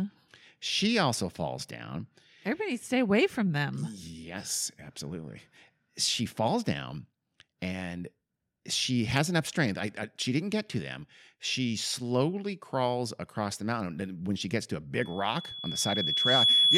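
At 15.01 s, just after "she gets to a", loudspeaker feedback squeal sets in and runs to the end at 16.77 s. A microphone is hearing its own loudspeaker. Around 3.4 kHz the loop gain has passed unity, so that tone feeds on itself. It swells over about a second and a half into a piercing whistle. It ends up roughly 10 dB louder than the speech beneath it.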